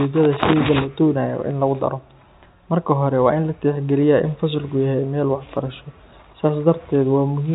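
No technical faults can be heard in the speech. It carries the narrow telephone bandwidth of G.711 mu-law coding, with nothing above 4 kHz, and any quantisation noise riding under the speech is faint at most.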